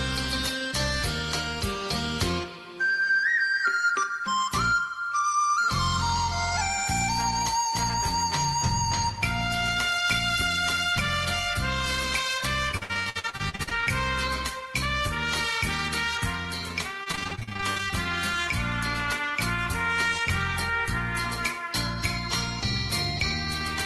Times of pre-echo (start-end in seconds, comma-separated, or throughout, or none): none